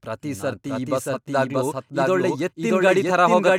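A short speech recording with a doubled audio track running throughout: every sound is followed about 0.7 s later by a second, full-band copy at roughly the same loudness, with no decay or room colouring, so it reads as a clean overlapping repeat rather than an echo. The likely cause is the audio being captured twice by a second, slower path, or an edit leaving two copies out of step. On a waveform, each burst reappears intact around 0.7 s later; a spectrogram shows the same harmonic and formant patterns duplicated and shifted along the time axis at matching brightness.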